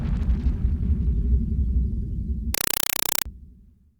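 From 2.54 s to 3.26 s the audio gives way to a compressed stream played as audio: harsh, very loud static chattering at 31.25 Hz, each 4 ms noise burst followed by silence. That regular burst-and-gap rhythm, unlike steady noise or clipping, marks undecoded Dolby Digital, consistent with a 192 kbps AC-3 stream.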